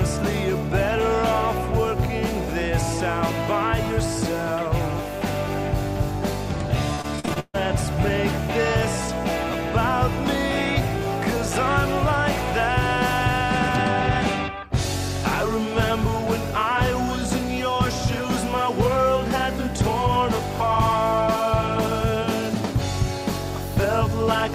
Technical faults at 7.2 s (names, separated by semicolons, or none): repeated packet loss (robotic sound)